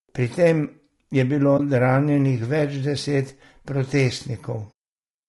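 The speech has most likely passed through low-delay AAC compression. At a bitrate that sounds near 32 kbps, the voice is plainly rough and grainy, with noise between harmonics and a thinned, synthetic top band.

AAC frame loss with muting occurs twice. From 1.57 to 1.6 s, just after "tem je bilo", the decoder zeroes a missing frame, and the overlapping windows fade the sound out and back in as a brief dip. A soft-edged muted hole at 4.72 s fits two lost frames.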